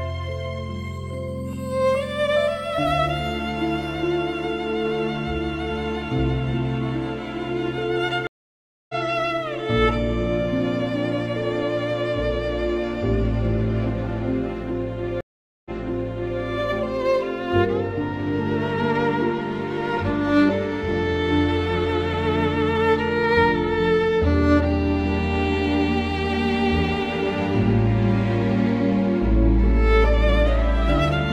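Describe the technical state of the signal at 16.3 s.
A stream reconnect spans 15.21 to 16.40 s. The connection dropped, leaving about 0.45 s of silence. The player then reconnected and started a fresh decoder, and the server's resent burst restarts the sound 0.74 s earlier, so 16.3 s falls in the resumed audio after a brief fade-in.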